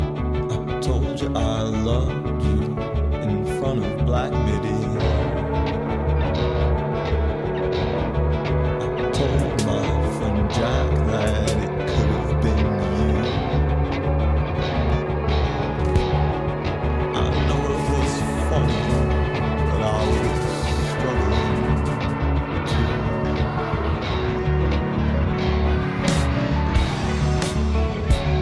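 No technical faults can be heard anywhere in this audio. Nothing in the clip calls for a timestamp or a note of concern.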